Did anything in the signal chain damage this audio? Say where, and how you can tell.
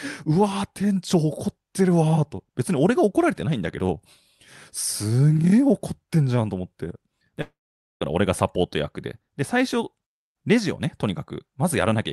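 Yes, at the network stage. From 7.41 to 8.03 s the speech smears into a fading buzz, then 0.48 s of silence, likely a long network dropout. A spectrogram shows blurred bands, then a blank gap.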